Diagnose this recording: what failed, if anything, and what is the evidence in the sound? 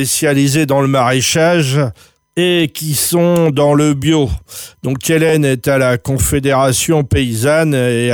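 The fault is overlapping chunks at the buffer or chunking stage. Clicks at 2.28 s and 5.29 s, about 3.0 s apart, show each chunk starting before the previous one ended, so about 13 ms plays twice. The waveform shows a step and repeated cycles; the spectrogram shows thin vertical broadband lines.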